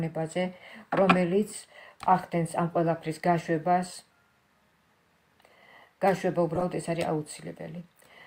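Two corrupt frames decoded interrupt the audio: a faint glitch at 3.93–3.96 s, fitting one damaged frame, and a louder glitch at 6.55–6.63 s spanning several. Unlike dropouts, they add misplaced energy rather than silence.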